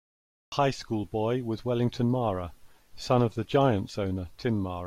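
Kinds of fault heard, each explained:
Cut-off start: the capture began late, so the clip opens on digital silence and the speech enters abruptly at 0.52 s already mid-sound, with no natural onset or rise in level. On a waveform this shows as a flat, silent line for the first half second, then a sudden jump in level with no ramp. A spectrogram shows an empty region followed by a hard vertical edge where energy appears across all frequencies at once.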